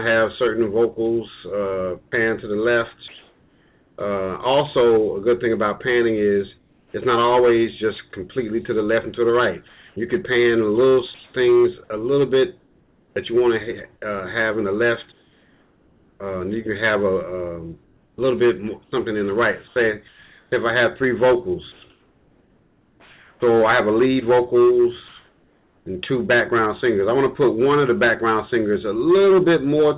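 Audio carried over a call path with G.711 mu-law coding, so nothing appears above 4 kHz on a spectrogram. At 2.08 to 2.12 s there is sound dropped by the voice detector: the sender likely misread part of a sound as background, losing about 20 ms of it, and 40 ms is filled with comfort noise. On a waveform the sound looks cut, with a short flat stretch of low noise before the signal resumes. Comfort noise in place of the background then runs on to 3.98 s (940 ms replaced) and recurs at 6.58 to 6.94 s (360 ms, about 3 dB quieter), 15.12 to 16.2 s (1.08 s, about 2 dB quieter) and 25.08 to 25.86 s (780 ms, about 2 dB louder), against a background about 40 dB below the loud parts. The likely cause is discontinuous transmission, where the receiver synthesises noise roughly matched to the background while the sender is silent. A spectrogram shows these pauses as smooth, even noise with none of the texture of the real background, and a waveform shows a steady band whose level steps at each edge. 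Sound chopped by the voice detector occurs at 9.68 to 13.16 s (1.1 s replaced in total) and 17.84 to 23.42 s (2.56 s replaced), where the detector likely switched on and off repeatedly. Parts of the sound there give way to comfort noise, leaving two or more holes. On a spectrogram these appear as abrupt gaps of featureless noise cutting into the signal.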